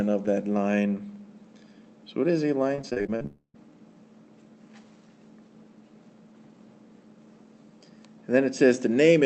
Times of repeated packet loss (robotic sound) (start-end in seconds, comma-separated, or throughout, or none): 2.75-3.26